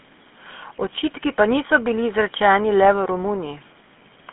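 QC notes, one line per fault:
Throughout: GSM full-rate codec. Speech is plainly buzzy and gravelly. A vocal-tract model driven by sparse pulses rebuilds it. Band runs 150 Hz to 3.4 kHz.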